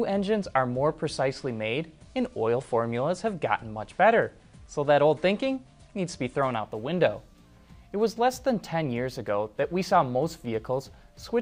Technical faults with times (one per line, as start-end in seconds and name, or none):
6.58-11.42 imaging from linear upsampling